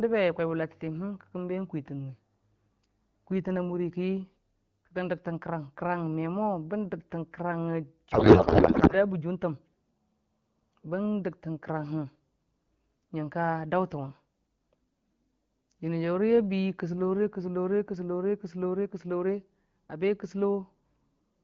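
From 8.11 to 8.94 s the speech collapses into garbled noise and warble that barely tracks it. This is a codec payload misread: octet-aligned AMR frames are being parsed as bandwidth-efficient, so every field lands in the wrong place. Clean AMR-WB speech resumes afterwards.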